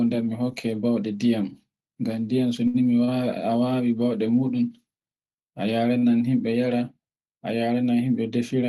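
Short stalls from late packets occur at 2.67, 3.04 and 5.98 s. Each time, the jitter buffer ran dry and stretched the last sound by 69, 33 and 41 ms. Nothing is lost; sounds just hang briefly.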